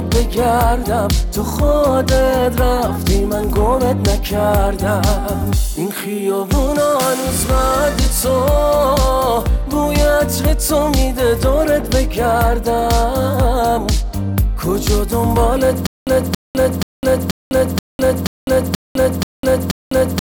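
A stream or player that likely stalled from 15.87 s to the end produces stutter with silent gaps: the same 278 ms fragment replays nine times, each followed by about 202 ms of dead silence, a steady 481 ms cycle, and the audio meant for that stretch never arrives.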